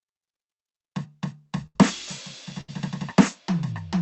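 At 1.66 s the music breaks up in a burst of packet loss. Several packets arrived too late or not at all. The receiver stretched the last sound for 85 ms and faded it down, so it becomes a brief held, dying sound. Then 90 ms of music is skipped. A second burst hits at 2.61 s. This fill lasts 72 ms, and 60 ms goes missing. The call codec's band tops out near 8 kHz.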